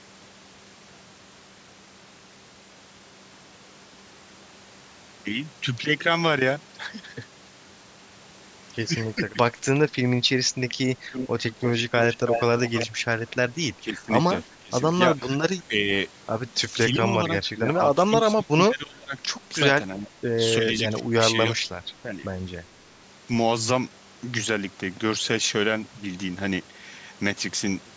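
Around 9.15 to 9.55 s the voice dips briefly, by up to about 15 dB over roughly a tenth and a half of a second in total. That's likely speech suppressed in double talk: with both ends talking at once, the echo canceller couldn't tell this talker from its own loudspeaker echo and pulled everything down. The same thing comes back harder from 13.74 to 15.88 s, with about a second of the talker chopped or dropped by up to about 15 dB. From 16.68 to 21.6 s it's worse again, with roughly two seconds lost in pieces and dips of up to about 20 dB.

In between, from 11.12 to 12.87 s, there's a delayed second copy of the voice trailing 331 ms behind, only about 5 dB under the direct sound. That's likely an echo leak: one side is on a loudspeaker, and its canceller let some of what its microphone picked up slip back down the line. The audio as a whole tops out around 8 kHz, consistent with call-style microphone processing.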